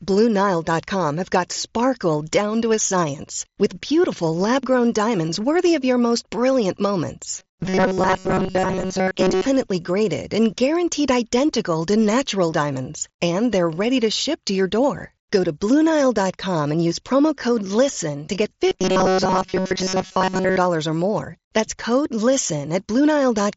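From 7.38 to 9.46 s, after "of your most brilliant", and from 18.67 to 20.57 s, after "to get", the speech turns into a rigid metallic buzz at 188 Hz. This is robotic sound from repeated short buffers, likely from about 5 ms of audio looping while most real input is skipped. The mSBC headset path tops out near 7.7 kHz.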